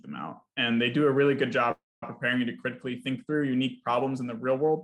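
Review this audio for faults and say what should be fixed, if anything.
A call audio freeze runs from 1.71 to 2.03 s. The last sound stretches into a fading buzz, then falls silent for about 0.21 s. Playback resumes where it stopped, likely because delayed packets emptied the jitter buffer. Nothing is lost, but everything after is 0.31 s late. A steadier network path or a deeper adaptive jitter buffer would prevent it.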